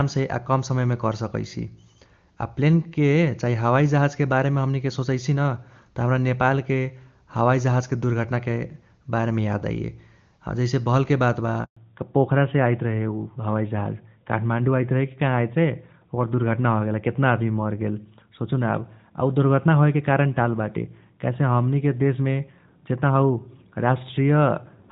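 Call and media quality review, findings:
Handover gap at 11.65 to 11.77 s, right after "भलके बात बा". Audio cuts out for 120 ms during network switch. No speech frames delivered until new link came up. Content in that span lost.

Fallback to narrowband from 11.77 s to end. Call dropped from AMR-WB HD Voice to a narrowband codec, consistent with AMR-NB at 12.2 kbit/s. Nothing above 4 kHz after the switch. Speech turns duller and rougher. Before it, wideband coding at 23.85 kbit/s sounds clear.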